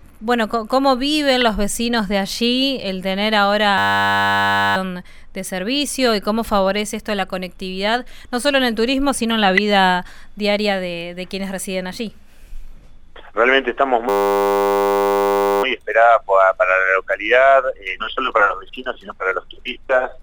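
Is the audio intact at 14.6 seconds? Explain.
No, 14.6 s falls inside a system hang loop running from 14.09 to 15.63 s. The system froze while the hardware kept replaying one 10 ms slice of buffer, so you hear a steady 100 Hz buzz instead of the sound, with about a second and a half lost.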